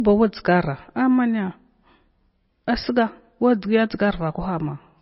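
MP3 compression, likely, throughout: everything above 5.6 kHz is cut and weak frequency lines flicker on and off, leaving the speech heavily watery and swirly.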